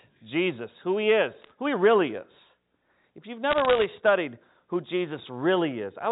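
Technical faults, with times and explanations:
1.42–1.52 s, bit errors on a digital phone line: between "who he" and "who he really is", flipped bits, under one percent, corrupt single samples, giving sharp ticks over the telephone-band G.711 sound.
3.51–3.86 s, bit errors on a digital phone line: a longer burst just before "studied who", with roughly half a percent of bits flipped, scatters crackle across the unchanged speech as individual samples jump.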